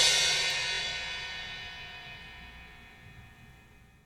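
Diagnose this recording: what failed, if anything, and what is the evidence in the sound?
Bluetooth stutter at 0.75 to 0.81 s. The failure is in the wireless link, at the receiver's playback buffer. For about 64 ms the sound freezes into a short buzzing repeat, the same slice of roughly 20 ms replayed back to back. The audio then resumes further along, as though it had kept playing underneath. About 46 ms of material is skipped, which fits two lost packets. While no new data was arriving, the receiver kept replaying its last buffer.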